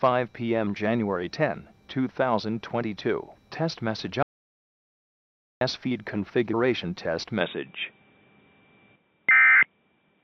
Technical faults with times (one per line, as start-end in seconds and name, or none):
4.23-5.61 audio dropout to silence
7.41-10.23 input switched to a poorer device